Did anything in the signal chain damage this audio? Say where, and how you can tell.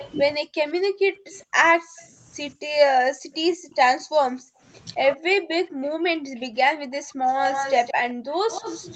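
Yes. Echo leak in call processing: a copy delayed 169 ms trails the speech at 0.0–2.08 s, 3.32–3.72 s and from 5.66 s, likely incomplete echo cancellation.

Speech suppressed in double talk, also call processing: from 0.38 s onward the speech drops by up to roughly 40 dB, likely the canceller ducking overlapping talk.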